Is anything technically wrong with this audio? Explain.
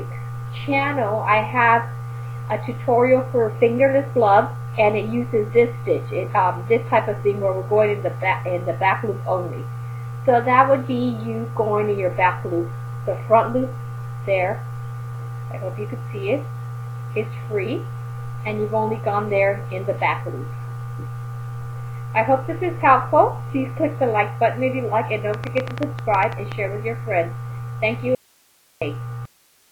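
Yes, two faults are audible near the end. From 25.34 to 26.53 s there is a train of clicks: about fifteen sharp pulses of much the same shape, arriving unevenly at an average of 11.1 per second and peaking roughly 10 dB above the programme level. They tick over the sound as a separate layer, which points to a likely source of repeated impulses such as electrical interference or a struggling interface injecting the same transient into the path.

From 28.15 to 28.82 s there is an audio dropout to a faint residue. The sound cuts off abruptly for 666 ms and then returns just as suddenly. There is no fade. The gap is filled only by hiss sitting about 35 dB below the normal signal level. That residue indicates the wanted signal was lost upstream while the rest of the chain stayed live, with a brief feed interruption the likely cause.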